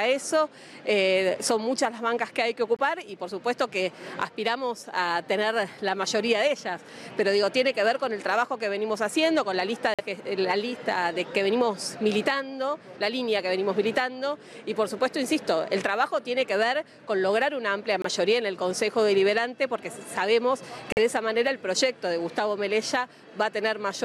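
At 2.76, 9.94, 18.02 and 20.92 s there are corrupt frame muted dropouts: damaged compressed frames got rejected by the decoder and swapped for silence. Each gap, 38 to 68 ms, cuts in abruptly, sized like one or two lost frames, and timing carries straight on.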